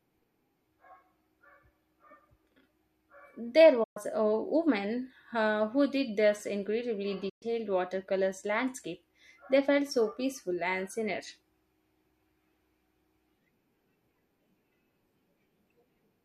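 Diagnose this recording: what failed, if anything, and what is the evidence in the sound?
What failed here is reception: a digital broadcast dropout, twice. The speech fades out over about 8 ms and goes dead at 3.83 s, coming back around 3.97 s on "a woman uh who", then again at 7.29 s right after "who did this incredibly", returning near 7.43 s with "watercolors landscape". Each hole is about 120 ms, which fits a handful of corrupt frames that the receiver muted rather than decoded. The audio in those gaps is simply lost.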